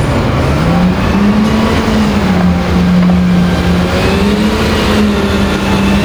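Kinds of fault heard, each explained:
Gain pumping: the gain is pulled down by around 5 dB on each loud sound throughout, likely from excessive input gain and a fast limiter.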